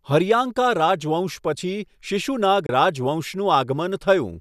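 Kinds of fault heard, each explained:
Digital broadcast dropout: at 2.66 s the sound fades over 3 ms into a 24 ms silent hole, which fits one lost frame. It is a clean mute, not a click or a smeared concealment.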